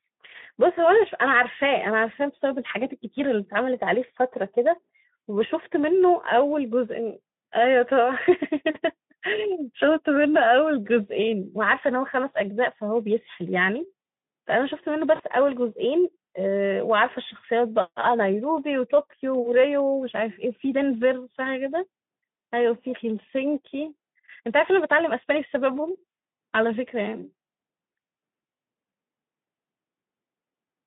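At 15.15 to 15.23 s and 24.23 s, VoIP packet loss concealed by the speech codec: the Speex decoder fills about 40 ms and 20 ms with a fading buzz or coloured noise, visible as smeared, decaying energy.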